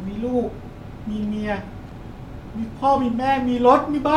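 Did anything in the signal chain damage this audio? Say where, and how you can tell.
Yes, in the analogue wiring. From 1.87 to 1.97 s there is a short, irregular burst of crackle over the speech. That is loose connector crackle. A worn or dirty contact kept making and breaking for about 100 ms, chopping the signal.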